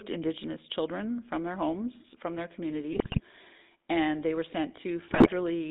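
A buzzy, gravelly roughness runs through the whole speech, confined to roughly 250 Hz to 3.7 kHz. This is the GSM full-rate codec, which rebuilds the voice from sparse pulses, consistent with a 13 kbps stream. From 2.92 to 3.21 s and again from 5.08 to 5.28 s the voice breaks into squawks and gargling pops. These are GSM bit errors: corrupted filter, pitch or gain values distorting several consecutive frames.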